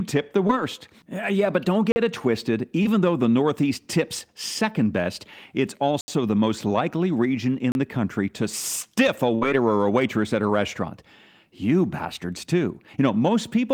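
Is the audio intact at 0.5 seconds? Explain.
No. A short concealed packet loss runs from about 0.47 to 0.51 s. About 20 ms of the speech never reached the decoder in time. The receiver covered the gap by extending the sound it had just played, about 15 ms of substitute audio, then blended back into the real signal. The result is a brief smear or wobble. A short consonant at that point may be lost.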